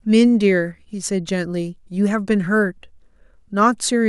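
Speech recording with no technical faults heard anywhere in it.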